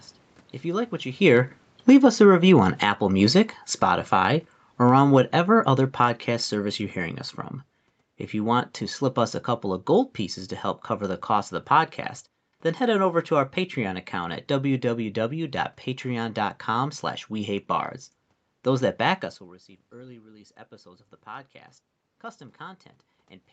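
Automatic gain falling, from 1.12 s to 6.88 s, affects this speech recording, which comes through a call path with nothing above 8 kHz. The level starts loud and then sinks steadily by about 14 dB over almost six seconds, with the room noise dropping along with the speech. The automatic gain control judged the input too hot or its background noise too strong and pulled its gain down gradually, so the sound and its background fade together.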